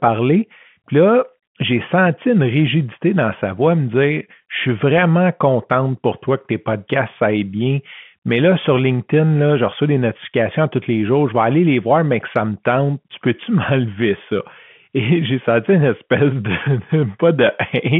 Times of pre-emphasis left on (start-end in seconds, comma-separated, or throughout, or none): none